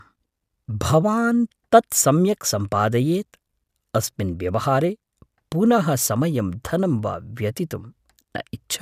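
Speech recording with no audible technical faults.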